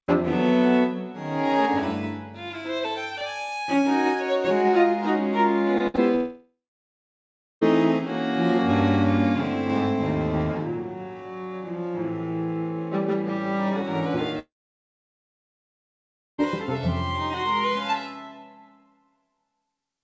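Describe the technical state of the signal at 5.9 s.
At 5.9 s the signal sits inside a burst of packet loss running from 5.87 to 5.96 s. Several packets in a row were lost or arrived too late to be played. The receiver extended the last sound for about 64 ms, fading it out. It is heard as a held buzz or dying hiss, and about 60 ms of audio is skipped.

Short concealed packet losses sit on either side, at 5.78–5.81 s and 5.96–5.99 s. In each, about 20 ms went missing and was patched with roughly 15 ms of continued sound. Each is heard as a brief smear or wobble.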